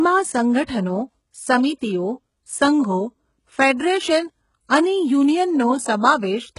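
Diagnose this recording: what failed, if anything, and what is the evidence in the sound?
The failure is at the codec stage. Throughout the speech there is no content above about 11.1 kHz, and the upper band that remains sounds synthetic: sibilants come out gritty and lispy, and the treble has a metallic sheen whose harmonics don't line up with the body of the voice below. The likely cause is heavy HE-AAC compression at a very low bitrate, around 12 kbps, with spectral band replication copying lower bands upward to rebuild the top end.

The same codec stage produces a pre-echo from 0.64 to 0.69 s. A short hiss spreads about 50 ms ahead of a sharp attack, and the onset itself sounds softened and smeared. The transform block containing that attack had its quantisation noise sized for the loud transient, and that noise was distributed across the whole block, including the quiet stretch before the attack, where nothing masks it.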